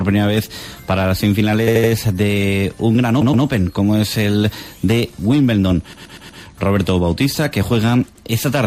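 Repeated frames cause a stutter at 1.67 s, 3.21 s, 5.93 s and 8.15 s. In each, a short run of compressed audio was decoded again: an 80 ms block plays three extra times at 1.67 s, a 120 ms block twice at 3.21 s and four times at 5.93 s, and a 100 ms block once at 8.15 s. The clip runs about a second longer in total. Unlike a dropout, nothing goes silent and no audio is lost. The same fragment simply plays again.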